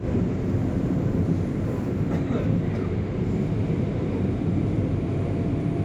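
A recording of everyday sounds with no technical fault to be heard anywhere in it. There is nothing here that needs a time or a cause.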